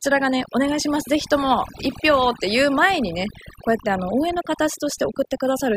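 Overdone noise removal runs through the whole speech clip. An aggressive noise reducer has pulled individual frequency bands down or out wherever they sat close to its noise estimate, so the background collapses into near silence dotted with twinkling specks. The quieter parts of the voice were stripped along with it. On a spectrogram the gaps appear as scattered isolated blobs in otherwise empty regions.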